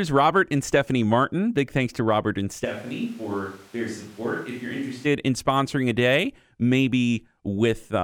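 At 2.66 s, right before "in sponsoring a day", the voice suddenly turns roomy and hollow, loses its low end, and drops by roughly 5 dB, with background room noise rising to only about 25 dB below the speech. That's most likely a switch to a distant microphone: the close mic dropped out and something further off, like a camera mic, took over. It snaps back to the close, full sound at 5.05 s.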